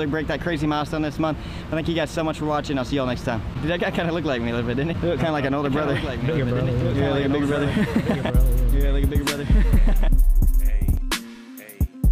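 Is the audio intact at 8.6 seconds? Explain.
No. At 8.6 seconds the sound is heard twice: a second, full-band copy trails the original by about two seconds, somewhat quieter, perhaps around 5 dB down, with no decay or room colour to set it apart. This is a doubled audio track, running from 5.65 to 10.97 s and starting and stopping abruptly. It is likely caused by the same audio being captured again through a slower path, or by an edit holding two out-of-step copies.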